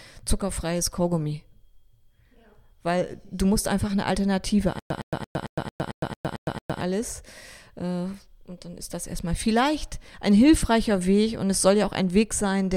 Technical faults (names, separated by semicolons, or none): stutter with silent gaps